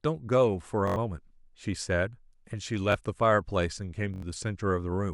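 Three times new audio arrived late, so the device replayed its last 21 ms buffer, which fits a 1024-sample buffer. This repeated buffer stutters with hard joins from 0.88 to 0.96 s and 4.14 to 4.22 s, losing about a tenth of a second each time, and repeats once briefly at 2.92 to 2.94 s.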